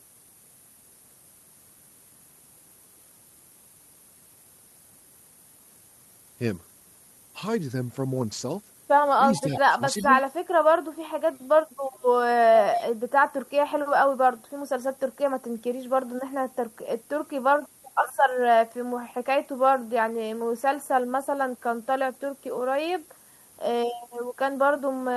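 Through the whole clip there's a steady thin hiss climbing toward the top end, low bit depth with noise shaping, with the grain pointing to roughly 8 bits.

From 9.38 to 9.59 s, 9.97 to 10.07 s, 11.93 to 12.02 s, 12.73 to 12.89 s and 13.46 to 13.50 s you get an echo leak, a 351 ms delayed copy of the speech that's likely far-end loudspeaker sound slipping past the echo canceller. It's faint in most spots but fairly loud at 12.73 s.

Around 9.46 to 9.51 s and 9.78 to 10.15 s the speech dips slightly, speech suppressed in double talk, likely the canceller ducking everything while both sides overlap.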